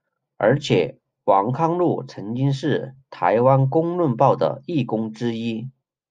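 No technical faults can be heard anywhere in the recording, and the signal stays intact throughout.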